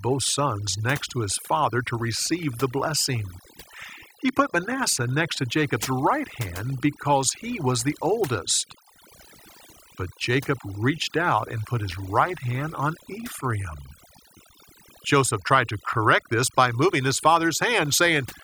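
Overdone noise removal runs throughout this speech recording. A noise reduction stage set far too aggressively is cutting individual frequency bands down or out wherever they sit close to its noise estimate, taking the quieter parts of the voice with them. That leaves near-silent gaps flecked with twinkling specks.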